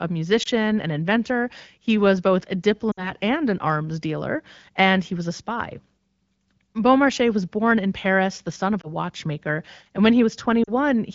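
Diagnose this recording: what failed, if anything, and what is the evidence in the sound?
Radio link: lost AMR speech frames cause brief dips at 0.43 s and 8.82–8.90 s after "the son of", and drops to near silence at 2.92–3.13 s after "was both a" and 10.63–10.69 s after "and when". The decoder patched each gap by repeating earlier parameters at falling gain.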